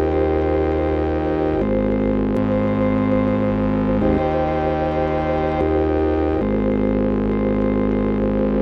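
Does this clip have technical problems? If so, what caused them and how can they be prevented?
Yes. The music has a doubled audio track from 2.37 to 5.61 s, most likely because a second, slower capture path was mixed in alongside the direct one. A full-band copy trails the original by roughly 150 ms at much the same loudness, so every attack sounds twice as a dry slapback, with no reverb tail or room colouring, and the copy cuts in and out abruptly at those edges. Routing each source through only one monitored path, and muting loopback or duplicate inputs before recording, prevents this.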